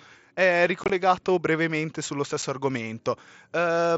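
Around 0.84 to 0.90 s, just before "brevemente sullo", you get unconcealed Bluetooth headset packet loss. Packets between headset and phone went missing and nothing filled in for them, so the speech has gaps with hard edges. About 37.5 ms is gone, spread over 60 ms, with the longest hole 22.5 ms, so it comes across as a rough, chopped stutter. Another single dropout at 2.42 s, right after "brevemente sullo", is a 7.5 ms hole. The mSBC wideband link carrying all this is working normally.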